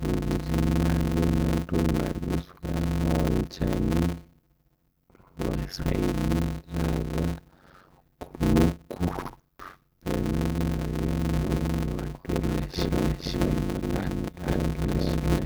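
Speech runs throughout with a steady buzz at 91.9 Hz and a delivery slowed to 0.533 times normal speed while the timbre stays. This is a block size mismatch (padded): each block is topped up with zeros, which fits 256-sample blocks being read as roughly 480-sample ones. The regular rate of the gaps and the slowing with the timbre intact separate it from random dropouts or a wrong sample rate. From 11.33 s to the end, a doubled audio track appears: a second full-band copy about as loud as the first, trailing by about a third of a second. It cuts in abruptly and carries no decay or room colour, so it is not a natural echo or reverb. A slower second capture path is the likely cause.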